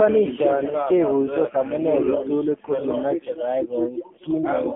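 Throughout, an AMR narrowband mobile codec running at a low rate, fitting about 6.7 kbps, removes everything above 3.5 kHz and leaves the speech heavily buzzy, synthetic and telephone-thin.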